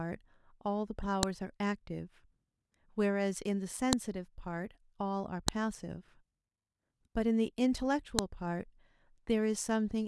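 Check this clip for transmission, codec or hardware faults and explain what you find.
A file header played as audio shows up four times, at 1.23, 3.93, 5.48 and 8.19 s. Separate WAV segments were joined without stripping headers, so those bytes play as samples. Each is a sharp, loud snap unrelated to the speech, unlike a dropout's gap or a spliced waveform's mild tick.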